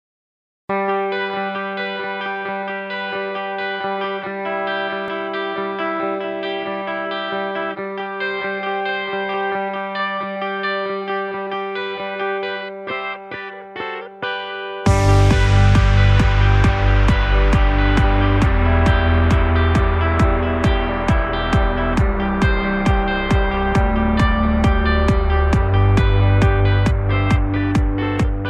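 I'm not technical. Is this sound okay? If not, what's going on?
Yes, nothing in this one sounds off, with no glitches, dropouts or odd noises anywhere in it.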